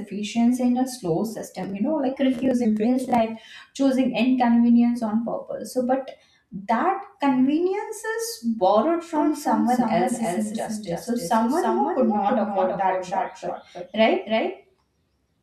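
From 9.16 s to the end, a doubled audio track appears: a second, full-band copy of the speech, somewhat quieter, trails about a third of a second behind, likely from a slower capture path. Unlike an echo or reverb, it switches on abruptly, repeats once, and never decays.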